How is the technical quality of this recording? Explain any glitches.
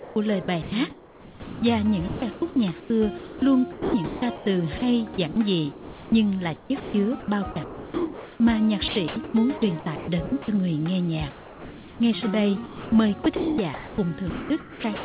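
The recording sounds choppy and band-limited, with nothing above 4 kHz, which fits a narrowband G.711 call path.

From 0 to 10.48 s and again from 12.66 s to the end, the sound is chopped by the voice detector. Quiet edges drop out, about 4.4 s and 1.3 s in total. The likely cause is the sender's voice detector repeatedly toggling transmission off, with the receiver filling each gap with comfort noise.

From 11.3 to 12.0 s, comfort noise replaces the background. The real background, about 21 dB below the loud parts, becomes a flat, featureless noise about 2 dB quieter. This likely happens because the sender stops transmitting during the pause and the receiver generates shaped noise until the sound resumes.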